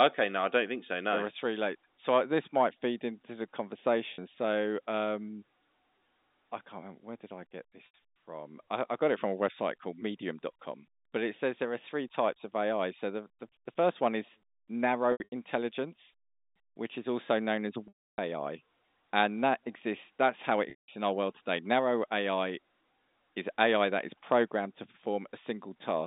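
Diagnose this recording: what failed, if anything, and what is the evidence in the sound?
The failure is on the network side: packet loss with pitch repetition. The concealer covers each gap by looping the last pitch period. The short drops at 4.14 s (40 ms) and 7.86 s (80 ms) come out as a brief buzzy hold. A scattered burst from 15.12 to 15.32 s, with runs up to 80 ms, and longer holes at 17.88 to 18.18 s (300 ms) and 20.70 to 20.88 s (180 ms) fade to silence after about 50 ms, then cross-fade back in. It all sits inside the 200 Hz to 3.7 kHz G.711 A-law telephone band.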